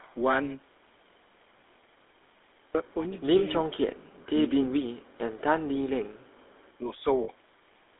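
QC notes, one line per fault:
Throughout: GSM full-rate codec. Buzzy, gravelly roughness from pulse-driven vocal-tract coding, consistent with 13 kbps. The spectrogram shows energy confined to 250 Hz–3.6 kHz, with nothing above.
3.38–3.44 s and 7.24–7.29 s: lost GSM frames. About 40 ms each, held as a rough metallic ring by repeating the last good frame. The spectrogram shows frozen, smeared bands instead of evolving formants.
3.6–5.15 s, 5.71–6.31 s, 6.78–7.05 s: speech suppressed in double talk. The voice dips by as much as about 35 dB in the first two spans, and only about 10 dB in the last. The likely cause is an echo canceller muting during overlap. The waveform shows envelope notches.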